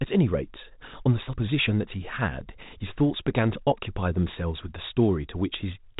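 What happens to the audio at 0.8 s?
Nothing goes wrong at 0.8 s: the speech runs on intact through the call path, with nothing above 4 kHz, which fits a narrowband G.711-type codec.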